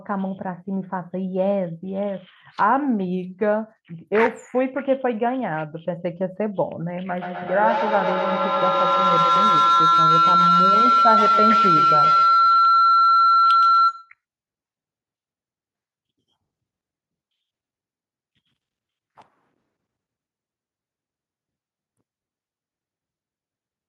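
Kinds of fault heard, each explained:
Feedback howl: 7.22 to 14.18 s, a microphone-to-loudspeaker loop gains level each pass, building a tone near 1.5 kHz that pulses about every tenth of a second and peaks about 4 dB above the speech.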